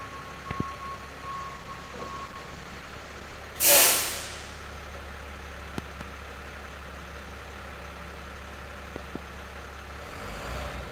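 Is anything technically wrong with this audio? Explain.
Yes, there are two kinds of fault.

Loud pops occur at 0.51 to 0.63 s, 5.78 to 6.03 s and 8.96 to 9.18 s. Each is a sharp double pop, about 15, 20 and 15 dB above the surrounding sound, which continues underneath. They are likely caused by a voltage pulse from a plug, switch, static or driver glitch.

A call bitrate drop runs from 1.33 to 3.45 s. The encoder was forced to code far more coarsely for about 2 s, which fits a fall from 64 kbps to around 17 kbps. The sound becomes rough and muffled, losing its top end until the rate recovers.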